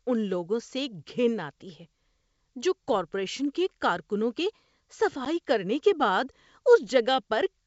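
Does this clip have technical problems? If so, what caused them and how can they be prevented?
Yes, there's packet loss on an ADPCM call: a hard-edged 10 ms gap, about one packet, at 5.25 to 5.28 s, just before "کرنے کے". The decoder's predictor and step size fall out of step, so the sound returns briefly disturbed. Packet loss concealment with decoder-state recovery would prevent it.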